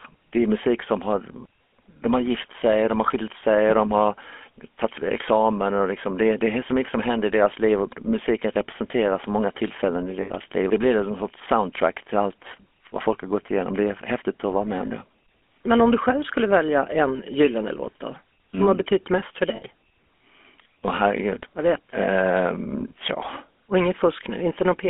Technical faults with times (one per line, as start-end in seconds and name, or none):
0.00-24.90 GSM full-rate codec
10.22-10.31 lost GSM frames
19.56-19.63 lost GSM frames